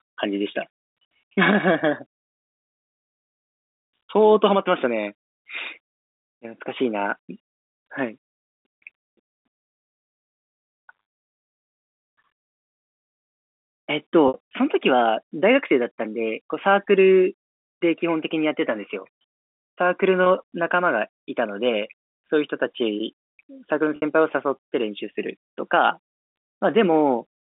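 Speech over a G.711 telephone line suffers packet loss with pitch repetition: the receiver bridged missing packets by repeating the last pitch period, leaving a brief buzzy, held sound at 20.24–20.26 s, while the longer gaps at 11.02–11.12 s, 14.28–14.34 s and 23.96–24.02 s fade into silence before the speech returns with a short cross-fade.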